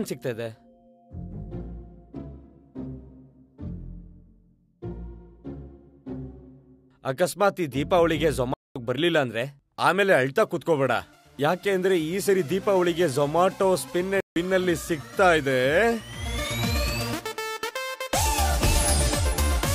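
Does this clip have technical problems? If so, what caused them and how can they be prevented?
Yes. There are two playback stalls, where the sound stops dead mid-flow and goes silent: from 8.54 to 8.76 s (about 218 ms) and from 14.20 to 14.36 s (about 158 ms). Each gap cuts in abruptly rather than fading. The likely cause is the player running out of buffered data, or its audio thread being blocked, so nothing reached the output until it recovered. A larger playback buffer and a high-priority audio thread that never waits on disk, network or locks would prevent this.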